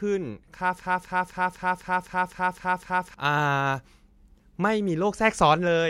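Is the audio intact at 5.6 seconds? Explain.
Yes, at 5.6 seconds the speech plays through intact, with no audible fault at that moment.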